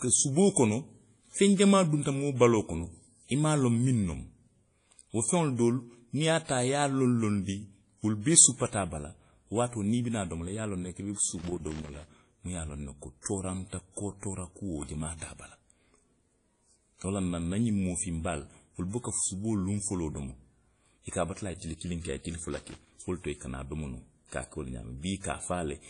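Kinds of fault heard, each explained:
WMA compression: The speech carries the ringing, washy smear of a transform codec, with noise that breathes along with the signal and nothing above about 10.1 kHz, which fits a low bitrate around 32 kbps; likely WMA. Unlike a plain low-pass, the damage is plainly audible and moves with the audio.
loose connector crackle: Irregular bursts of scratchy crackle run from 11.38 to 12.06 s and from 22.53 to 22.91 s, just before "wo le to i", as a failing contact chops the signal. Unlike codec noise, these bursts stand apart from the speech and come and go abruptly.
pre-echo: At 13.22 s a short hiss spreads about 37 ms ahead of a sharp attack, because the codec's noise, sized for the loud onset, also fills the quiet moment before it. It differs from crackle by clinging to the attack.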